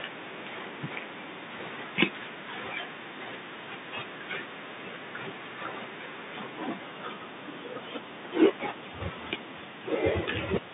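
No technical faults are audible in the speech, which carries the narrow band of G.711 telephone coding, roughly 150 Hz to 3.7 kHz, as a normal phone line would.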